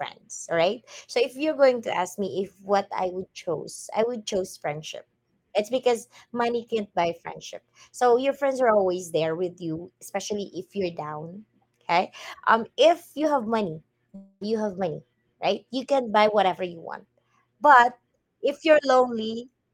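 From 14.15 to 14.43 s, after "if you have money", a fading buzz, likely a long network dropout, stretches the last sound, showing smeared, repeating spectrogram bands until "have money right you".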